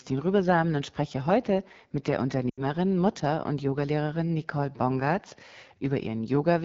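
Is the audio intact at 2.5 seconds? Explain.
No. Lost AMR speech frames cut in from 2.50 to 2.62 s. About 80 ms of audio failed to arrive intact, which fits four consecutive 20 ms frames rejected on their checksum. The decoder bridged the gap by reusing the last good pitch and vocal tract settings at falling gain, so the sound drops to near silence within two frames, as wideband concealment does, before returning weak or rough for a moment.

Underneath that dropout, the AMR wideband (HD Voice) codec is plainly audible at this moment too. Its rough, raspy texture points to one of the two lowest modes, around 8.85 kbit/s. The pulse-driven vocal tract model codes content up to 6.4 kHz, and the band from 6.4 to 7 kHz is filled with shaped noise rather than real detail.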